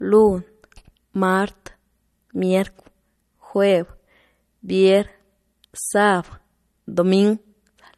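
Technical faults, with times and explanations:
Throughout, low-bitrate audio saved at a high bitrate: the speech carries the smeared, swirly artefacts of heavy MP3 compression and has nothing above 13.1 kHz, yet the file's rate is high. The likely cause is an earlier low-rate MP3 encode, perhaps near 48 kbit/s, re-encoded at around 254 kbit/s, which kept the damage without repairing it. Unlike a plain low-pass filter, the brick-wall cut-off comes with codec artefacts that the high rate cannot explain.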